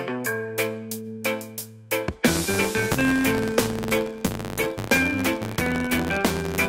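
From 2.28 s to the end, a filter is restarted on every block: it discards its internal state at each block boundary and processes every new block as though the input before it had been silence. Each restart leaves a small transient at the start of the block, and these repeat at about 93.8 Hz, a rate that fits a 512-sample block. The result is a steady buzz riding on the audio that grows louder and quieter with the signal's level.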